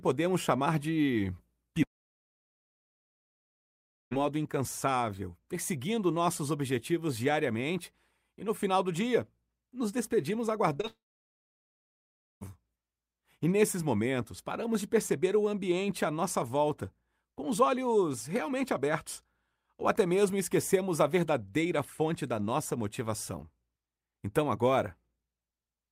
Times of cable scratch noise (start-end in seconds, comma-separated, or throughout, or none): none